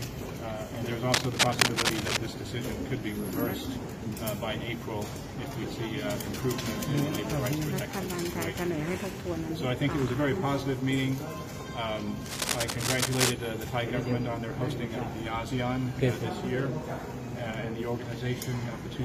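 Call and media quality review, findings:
Cable scratch noise, 1.12–2.17 s: dense, uneven scratching burst, somewhat louder than the programme. Likely a worn cable, connector or control being moved, its contact resistance fluctuating rapidly.

Cable scratch noise, 12.26–13.33 s: similar rustling burst, roughly level with the programme. Likely the same intermittent-contact mechanism; inspect and reseat or replace the suspect lead or jack.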